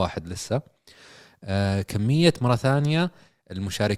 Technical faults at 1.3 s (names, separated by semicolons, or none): none